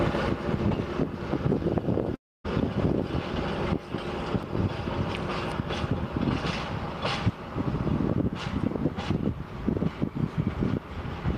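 At 2.15 s the sound breaks off. What remains is a smeared continuation of the last moment, a fading buzz that quickly sinks to near silence. Normal audio returns at 2.46 s, but about 300 ms of material never comes back. The signature is a long network dropout, with the receiver likely stretching the final sound to cover the hole, then giving up. The resumed audio jumps ahead, so the passage sounds clipped out.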